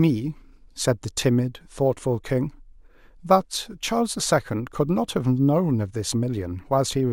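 A gritty, inharmonic fizz rides on the speech from start to finish, strongest on loud and bright sounds, around 25 dB below the signal. This is crude rate conversion: samples repeated without filtering, in a pattern that fits a 32 kHz to 48 kHz change.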